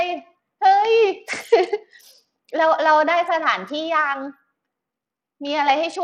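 Bluetooth SBC compression runs through the whole clip and is plainly audible. The treble flickers and drops out, and a gritty noise with aliasing rides on the speech. It likely comes from SBC starving its upper sub-bands of bits, which fits a bitrate near 80 kbps.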